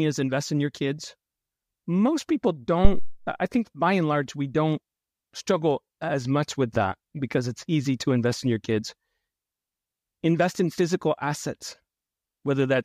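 At 2.85 s a phantom power thump hits: supply switching on the live input sends a step through the coupling capacitors, giving a deep thump peaking near about -3 dBFS, decaying over 85 ms, ending by 3.23 s.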